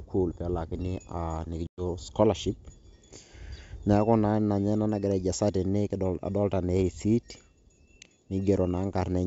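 Packet loss on an ADPCM call appears at 1.67 s and runs to 1.82 s: about 110 ms of the speech drops to hard-edged silence, which fits around ten lost packets. On the 64 kbit/s G.722 link, the decoder's predictor and step size drift from the sender's, so the speech resumes with brief distortion before settling.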